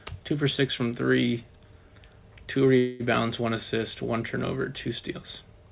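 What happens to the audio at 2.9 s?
A call audio freeze runs from 2.78 to 3.03 s. The sound stalls, and the last fragment is stretched into a fading buzzy hiss for about 0.22 s, without dropping into silence. The likely cause is packets arriving late, so the jitter buffer ran dry and the receiver filled the wait. Unlike a dropout, nothing is lost. The audio resumes exactly where it stopped, just about 0.22 s later, still band-limited below 4 kHz.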